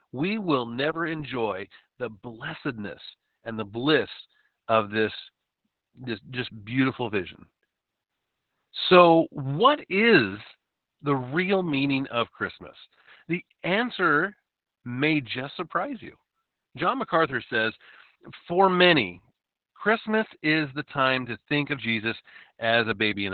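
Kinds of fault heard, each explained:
Opus voice compression: The speech has been squeezed through a linear-prediction voice coder running in its narrowband mode, with nothing above 4.4 kHz and the excitation coded coarsely. The damage is heavy, which fits a bitrate around 8 kbps. Voices come out muffled, hoarse and faintly robotic. A simple low-pass filter would dull the top without this rough, synthetic grain, and an MP3-style codec would leave swirly, metallic smearing instead.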